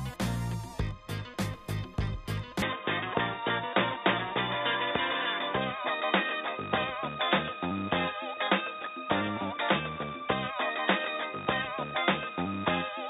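At 2.62 s the audio abruptly narrows and stays that way to the end: nothing above 3.8 kHz survives, the level shifts by about 5 dB, and a new noise floor appears roughly 40 dB down, with no gap at the change. This is likely an input switched to a poorer device.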